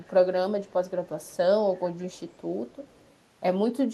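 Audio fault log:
0.68–0.73 s, 1.07–1.37 s, 2.13–2.38 s, 2.71–3.14 s, echo leak: a very faint, delayed copy of the speech trails the original by 168 ms, sitting far below the direct sound and surfacing only in these short scraps rather than continuously. The likely cause is a far-end loudspeaker whose echo canceller let part of its microphone pickup through, so remnants of the returned signal were sent back down the call.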